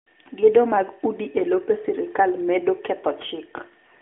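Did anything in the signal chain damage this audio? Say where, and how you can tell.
No, nothing in the chain damaged this speech; it comes through an AMR narrowband mobile codec at 12.2 kbps, which leaves the band limited to roughly 250 Hz to 3.4 kHz with only light coding texture, as expected for that path.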